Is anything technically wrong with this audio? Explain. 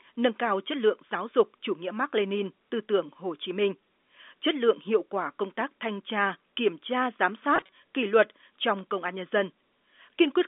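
Yes. Between 7.56 and 7.71 s there is packet loss with pitch repetition: about 80 ms of audio went missing in short gaps scattered over roughly 160 ms, the longest 20 ms, which fits a handful of lost 20 ms packets. The receiver filled each gap by repeating the last pitch period, so the speech briefly sounds held and buzzy rather than dropping out. The G.711 telephone coding caps the band at about 250 Hz to 3.6 kHz.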